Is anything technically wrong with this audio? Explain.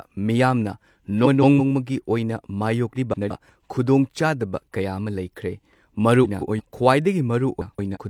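Yes. The speech has frames out of order at 1.24–1.60 s, 2.95–3.31 s (just before "ꯈꯨꯗꯣꯡꯆꯥꯗꯕ ꯀꯌꯥ ꯑꯃ"), 6.24–6.61 s and 7.61–7.97 s. In each, two adjacent runs of about 0.17 s arrived swapped and the decoder played them in that sequence, so the halves of each stretch are exchanged. This is heard as a brief garbled flutter. No time goes missing.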